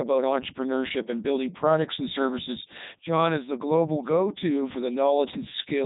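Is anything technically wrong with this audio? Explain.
Yes. Codec 2 vocoder, throughout: the speech is rebuilt from sine waves using only pitch, voicing, energy and a spectral envelope. The result is heavily damaged, robotic and buzzy, with nothing above 3.8 kHz. This fits the 3.2 kbit/s mode.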